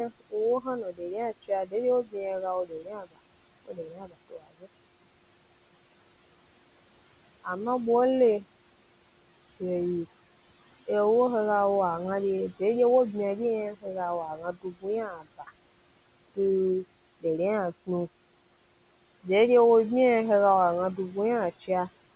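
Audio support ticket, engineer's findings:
Noise suppressor artifacts, throughout. Background drops about 21 dB between phrases and swells back under speech. The suppressor attenuates bands it classes as steady noise, frame by frame, fed by room noise about 17 dB below speech.

Speech cut by the noise suppressor at 0.09–1.02 s, 1.43–2.16 s, 2.65–3.17 s, 3.66–4.68 s and 14.36–15.5 s. Soft consonants and word endings sound swallowed, dipping about 19–21 dB for a few hundred ms per window. The suppressor misreads low-level speech as noise and turns it down with the background.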